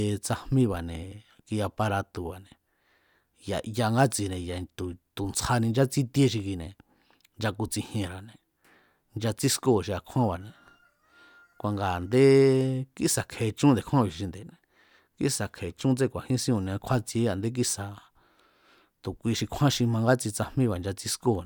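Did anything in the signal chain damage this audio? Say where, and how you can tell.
No, nothing in the signal chain damaged this audio.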